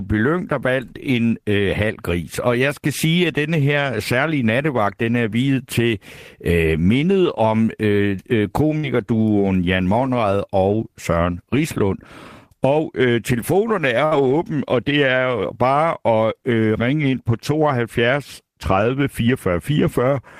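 At 8.77 s, after "mindet om øh øh", and again at 14.05 s, a burst of packet loss drops about 60 ms. The last sound is stretched and faded, then the speech jumps ahead.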